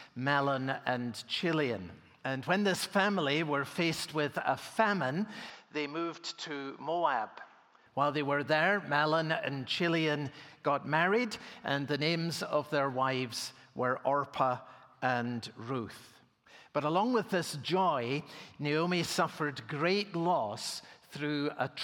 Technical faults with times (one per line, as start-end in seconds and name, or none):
5.50-7.86 input switched to a poorer device